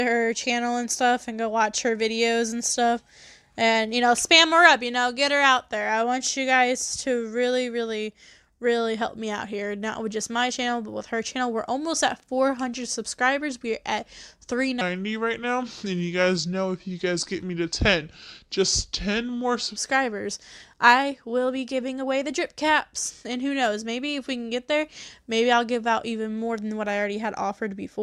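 At 14.81 s there's a section at the wrong speed, running to 19.76 s. For about five seconds the sound drops to roughly 0.785 of its proper rate, so everything slows and sinks together, around four semitones lower, giving that heavy, dragged-out quality. Speed and pitch move as one, which most likely points to that stretch being played back or resampled against the wrong clock, before it snaps back to normal at 19.76 s.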